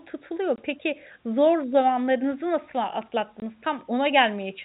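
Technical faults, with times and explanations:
0.56–0.58 s and 3.40–3.42 s: packet loss filled with silence. Brief 20 ms holes with hard edges cut the telephone-band speech, each where one lost packet was replaced by silence.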